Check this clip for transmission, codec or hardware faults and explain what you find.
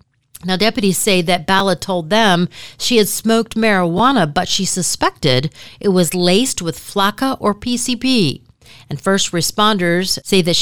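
Three repeated-buffer faults are present in this speech. At 1.59 s, after "deputies say that", and at 3.98 s, after "them she had smoked", a piece of about 12 ms plays twice. From 6.48 to 6.50 s, after "she suspected it was", it plays three times. When new audio arrives late, the device replays its last block, which fits a 512-sample buffer. Each fault sounds like a click or brief buzz and drops roughly 10–20 ms. The waveform shows identical copied segments with hard joins, and the spectrogram shows thin vertical lines.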